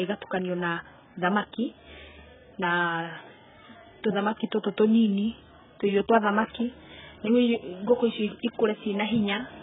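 Throughout, AAC compression at a very low rate dulls the speech: nothing above 3.7 kHz, with fizzy, warbling sibilants, likely 8 kbps, unlike plain low-pass filtering.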